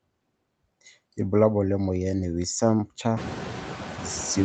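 Noise suppressor artifacts run through the whole speech clip. The suppressor judges, frame by frame, which frequency bands hold steady noise and pulls them down by about 18 dB. The noise floor therefore drops away between words and comes back up beneath them. The room noise climbs by about 21 dB around 3 s, to about 11 dB below the speech.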